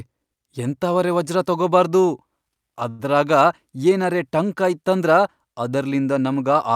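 A speech recording with one short stall from a late packet at 2.89 to 3.01 s. The jitter buffer ran dry, so the last sound gets stretched for about 96 ms until the packet shows up. Nothing goes missing, but everything after it lands 96 ms late.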